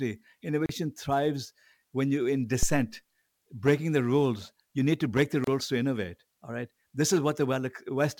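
Separately encoded pieces of this speech were joined without trimming the encoder's start-up delay and final-frame padding, leaving a gap at a join of encoded pieces from 0.66 to 0.69 s, just before "thrives when you're in". About 33 ms of silence cuts into continuous sound, its edges smeared by the codec, before the audio resumes where it stopped.

Next, a supply, most likely phantom power, is switched on or off on the live input, and the voltage step passes through the coupling capacitors as a phantom power thump at 2.63 s, after "thrives when you're in". A deep low-frequency thud decays within about 62 ms, its disturbance lingering until about 2.90 s.

The same untrimmed join recurs from 5.44 to 5.47 s, between "need to break the" and "to innovate": a second gap at a join of about 31 ms, with the same soft-edged dropout before the sound continues.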